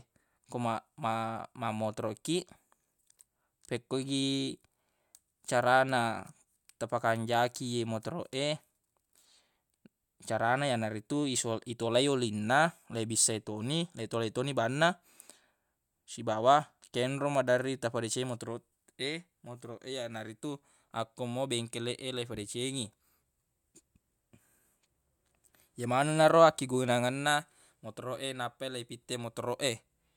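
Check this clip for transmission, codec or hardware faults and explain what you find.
No faults turn up in the clip.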